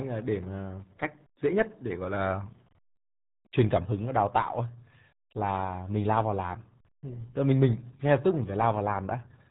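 RealAudio 14.4 codec damage runs through the whole speech recording, from start to finish. Nothing above 3.8 kHz survives, so the voice loses its upper range and sounds dull and boxed-in. The damage is heavy. A coder this starved of data can only keep a crude model of each speech frame, and that leaves a muffled, gargling texture on every syllable. The sound points to a low-rate dial-up codec at around 8 kbit/s.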